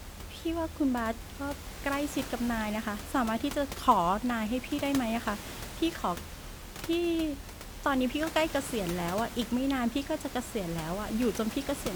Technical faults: none

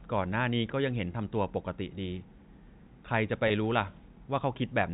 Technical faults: packet loss with pitch repetition

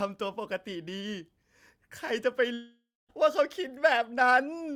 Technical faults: long network dropout

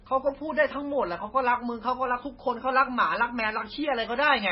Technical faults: MP3 compression

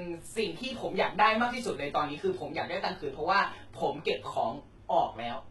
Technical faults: HE-AAC compression

